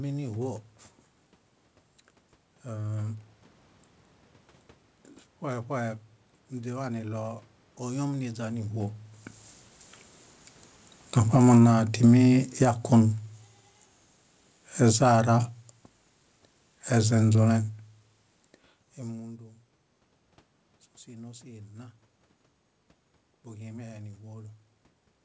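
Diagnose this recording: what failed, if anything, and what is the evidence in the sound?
Speech and room noise sink together by about 11 dB between 11.05 and 18.04 s. This is automatic gain falling in call processing, where the AGC judged the input too loud.

Voice and background swell together by about 5 dB from 11.69 to 13.16 s and about 4 dB from 15.1 to 15.53 s. This is automatic gain rising, where the AGC boosted what it judged too quiet.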